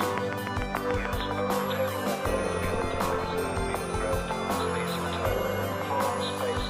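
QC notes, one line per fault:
0.03–1.22 s, train of clicks: about ten evenly spaced pops at 6.8 per second, peaking roughly 20 dB above the audio, likely electrical interference. Regular vertical spikes on the waveform.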